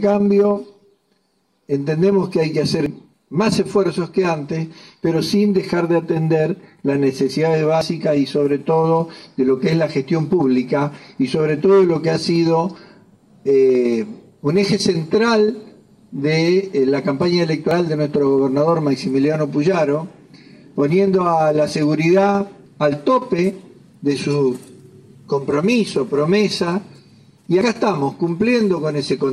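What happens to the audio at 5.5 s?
Nothing goes wrong at 5.5 s; the audio plays through that moment intact, with no dropout, click or other fault.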